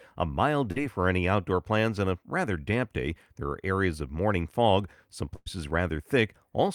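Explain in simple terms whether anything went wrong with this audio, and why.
At about 0.71 to 0.78 s, just before "for any outdoor plans", there is a brief smear where the speech wobbles for a moment. This is short concealed packet loss: roughly 40 ms of the call arrived too late, so the receiver stretched out the preceding sound to cover the gap.

Later, from about 5.36 to 5.48 s, right after "of morning fog some", the speech briefly holds and fades before jumping ahead. This is a burst of packet loss: about 100 ms never arrived, and the receiver filled the hole by continuing and fading the last sound, so that stretch of speech is missing.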